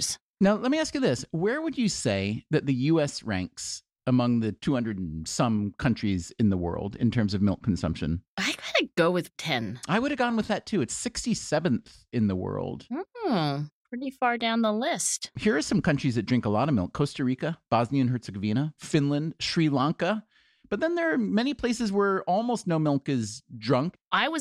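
No technical faults can be heard anywhere in this recording.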